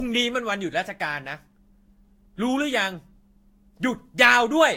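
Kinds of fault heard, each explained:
Generation loss: throughout, the speech sounds swirly, smeared and hollow, with blurred onsets and nothing above 16.6 kHz, likely from about three Vorbis-style re-encodes near 58 kbit/s. Unlike one low-bitrate pass, the damage is worse than that bitrate alone explains.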